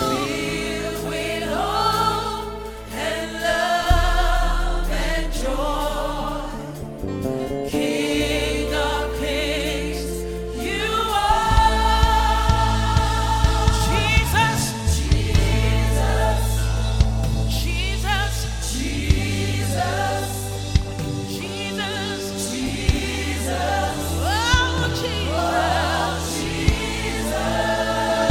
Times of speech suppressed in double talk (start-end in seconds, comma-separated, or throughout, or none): none